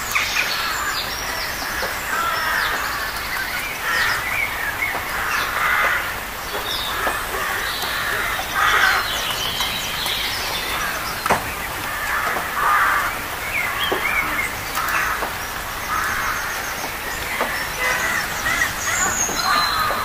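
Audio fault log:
No faults can be heard anywhere in the audio. Nothing in it calls for an entry in this log.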